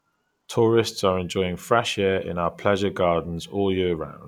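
Listening through the speech, nothing stood out as a technical fault at any point.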